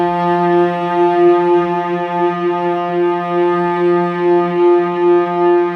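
At 2.76 s the pace of the sound changes abruptly and stays changed to the end. From there the audio plays at about 0.53 times its original speed, so roughly half pace. The pitch does not drop with it. The slowed part drags. This is likely a time-stretched section, where software lengthened the audio and kept the pitch by repeating short fragments.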